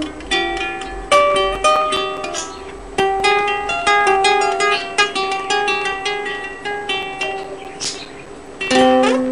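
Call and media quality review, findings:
CD scratch ticks, 1.14–3.41 s and again 6.82–8.67 s. Regular clicks and tiny gaps at about five a second, of uneven strength, the longest just a few ms. Probable component: disc read path. A scratch is eating more data per revolution than error correction can rebuild, so the player interpolates or mutes the damaged samples once per turn. Worth checking the source disc.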